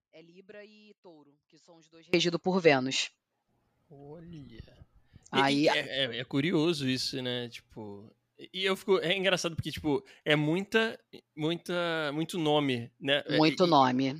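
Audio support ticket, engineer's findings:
Likely upstream signal loss with downstream path still live; audio dropout to a faint residue already under way at clip start, 0 to 2.14 s. Faint sound remains far below normal level, roughly 30 dB down, then speech returns abruptly, not a fade.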